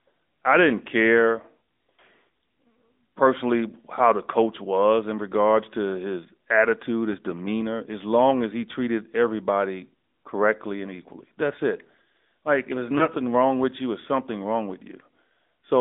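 Speech heard through the AMR narrowband mobile codec for its whole length: the band runs only from about 250 Hz to 3.7 kHz, and the plainly audible buzzy, synthetic quality comes from a vocal tract model rebuilding the voice from a pitch predictor and a few pulses, which fits a mid-range rate near 10.2 kbps. A spectrogram shows nothing above 3.7 kHz and an empty strip below 250 Hz. Lost AMR speech frames occur at 7.12 s and 12.98 s, one 20 ms frame each. Each time the decoder replays the last good pitch and vocal tract settings at falling gain, giving a brief dip or warble lasting about 0.05 s and 0.09 s respectively. On the waveform each appears as a short sag in level with smoothed, repeated cycles, and on the spectrogram as a brief run of smeared, flattened harmonics before the speech recovers.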